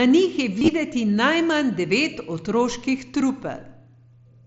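From 0.59 to 0.68 s, between "njih je" and "najmanj devet otroških", concealed Bluetooth headset packet loss breaks up the sound. About 60 ms of audio went missing across that 90 ms stretch, in short gaps no longer than 22.5 ms, which fits roughly eight dropped frames. The receiver filled each gap by repeating a matching piece of the preceding waveform. The result is a buzzy roughness with a slight warble. A waveform view shows copied cycles at steady level, and a spectrogram shows held, repeated harmonics under the mSBC codec's 8 kHz ceiling.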